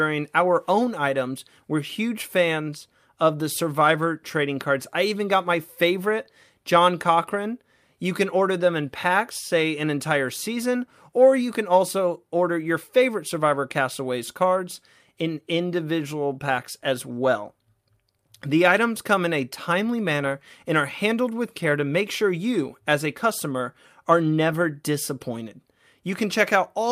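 Speech recording with nothing technically wrong with it at any point.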